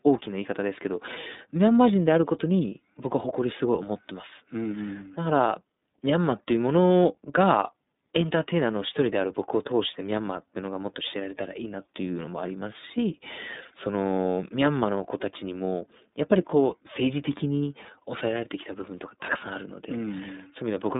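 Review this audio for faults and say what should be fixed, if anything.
iLBC codec damage runs throughout: nothing above 3.8 kHz survives, and the speech sounds plainly rough and synthetic because each frame's excitation is coded on its own, which fits 30 ms frames at 13.33 kbps. Unlike packet loss, nothing drops out or gaps. Route this path through a wideband codec instead.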